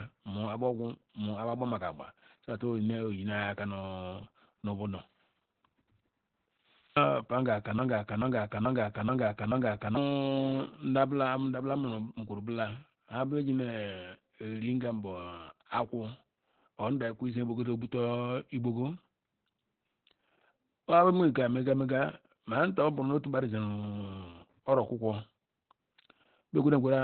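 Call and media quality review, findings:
Opus voice compression, whole clip: muffled, hoarse, slightly robotic speech; spectrogram shows a hard ceiling with nothing above 4.2 kHz, consistent with narrowband SILK at about 8 kbps.

Broken-record loop, 7.79 to 9.97 s: a 0.43 s fragment repeats five times back to back, shown as identical waveform blocks; the stream or player likely stalled, dropping the intended audio.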